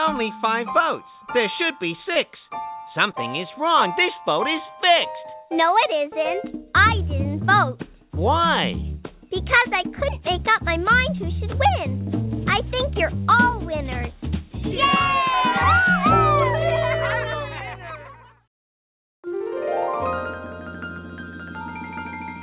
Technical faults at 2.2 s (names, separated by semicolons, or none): short concealed packet loss